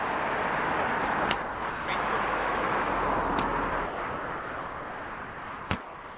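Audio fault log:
1.70–1.88 s, 3.86–5.70 s and 5.82 s to the end: sound dropped by the voice detector. The audio gives way to steady, featureless noise for 0.18 s, 1.84 s and about 0.35 s, likely because the sender's detector judged it background and stopped transmitting, leaving the receiver to fill the gap with comfort noise.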